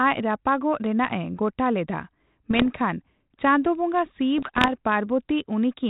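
After "ᱜᱚᱴᱟ ᱞᱮᱫᱟ" (2.51 to 2.67 s) and "ᱪᱟᱸᱫᱳ ᱵᱚᱸᱜᱟ" (4.38 to 4.74 s), bit errors on an ADPCM link derail the decoder's step size and prediction, causing pops and rough bursts. These show as abrupt level jumps in the waveform and broadband vertical smears below the 4 kHz band ceiling.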